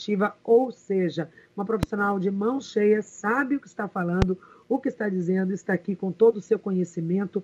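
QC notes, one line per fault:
1.83–1.85 s and 4.22–4.24 s, loud pop: single sharp pops about 15 and 20 dB over the sound, which continues underneath, likely a voltage spike from a plug or switch.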